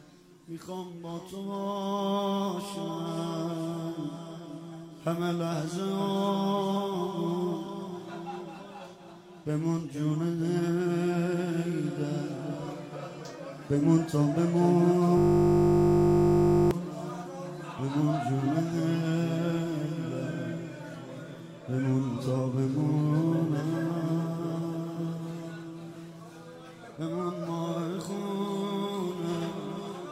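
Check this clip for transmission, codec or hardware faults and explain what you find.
One hardware-side fault is present. From 15.18 to 16.71 s the audio gives way to a steady, flat buzz at 50 Hz. This is a system hang loop: the computer or its audio driver stopped supplying new samples, but the sound hardware kept replaying the same 20 ms stretch of its ring buffer, 77 times in a row. A loop that short repeats quickly enough to fuse into a tone rather than a stutter.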